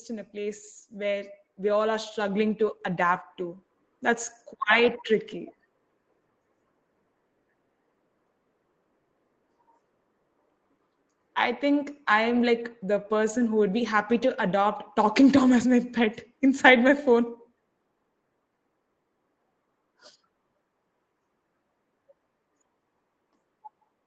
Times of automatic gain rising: 0.31-4.36

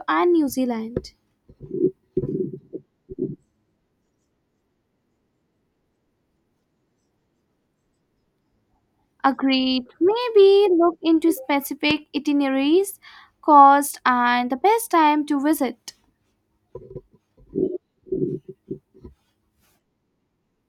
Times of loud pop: 11.91-11.93

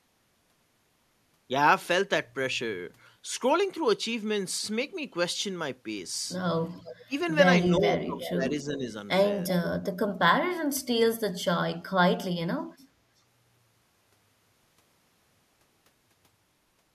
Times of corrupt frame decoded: none

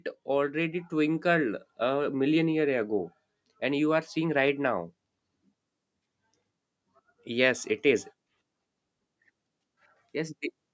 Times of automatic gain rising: 0.50-3.67

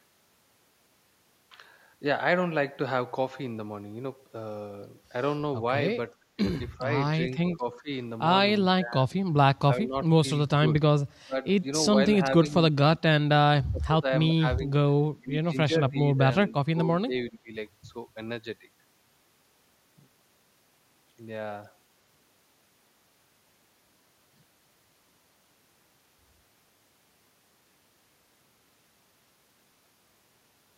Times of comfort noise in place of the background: none

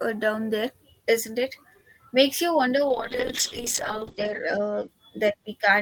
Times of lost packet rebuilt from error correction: none

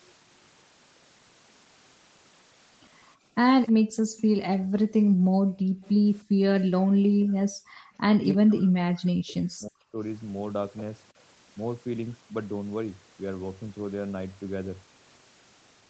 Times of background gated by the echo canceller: 3.79-6.43, 7.80-7.87

